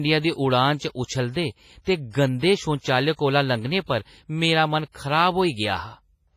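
WMA compression, likely, throughout: heavy long-block quantisation noise smears into ringing, washy hiss that breathes with the speech. Nothing above 15.5 kHz fits about 24 kbps.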